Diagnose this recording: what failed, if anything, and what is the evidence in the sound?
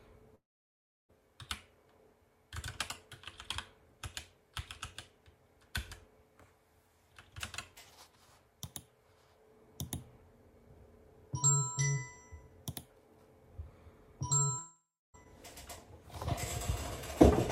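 Network stage, most likely a long network dropout. At 0.35 s the audio stops and is replaced by a continuation of the last sound that fades into silence, leaving a gap of about 0.68 s before the audio resumes at 1.11 s with roughly 0.74 s missing. The same pattern recurs from 14.59 s to 15.16 s: about 0.56 s lost, with silence for about 0.31 s. The receiver's concealment extended the last sound, then gave up, and playback resumed past the missing audio.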